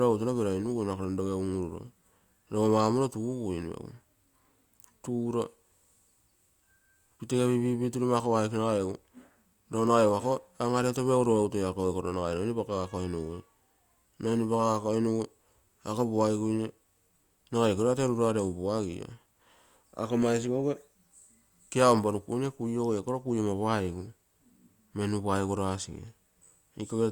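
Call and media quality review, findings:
Clock slip clicks, 0.21 s to 27.03 s: faint steady ticks under the speech, roughly every 0.15 s, around 150 in all. Likely two unsynced device clocks about 150 ppm apart, each slip dropping or repeating one sample. Check clock sync.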